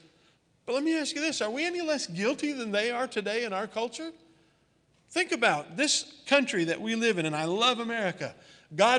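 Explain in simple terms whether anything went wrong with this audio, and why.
Nothing went wrong with this audio; no fault can be heard anywhere in it.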